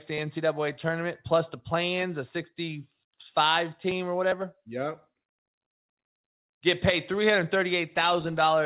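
No faults are audible in the speech; the band ends at 4 kHz, consistent with a narrowband G.711 mu-law call path running normally.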